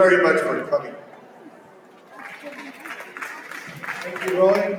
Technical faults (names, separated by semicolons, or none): noise suppressor applied to music or sounds; sound cut by the noise suppressor